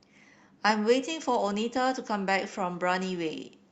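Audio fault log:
Nothing to log here, as this bit of speech came through an ordinary Opus call path, and apart from the top end rolling off around 8 kHz as that path does, there's nothing to flag.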